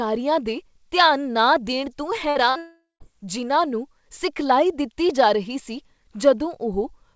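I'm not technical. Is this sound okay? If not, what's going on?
No. Two short bursts of packet loss hit at 2.30 to 2.38 s and 2.50 to 2.58 s. Each time a small piece of the call never arrived, so the speech is briefly stretched into a held buzz or hiss that fades, and the next bit jumps ahead, skipping about 60 ms.

Right after, from 2.58 to 3.03 s, comes what is likely a long network dropout. Unlike the short bursts, the fill-in sound runs on and dies away into silence for the last part, and speech resumes at "ਜਿਨ੍ਹਾਂ ਨੂੰ" with almost half a second missing.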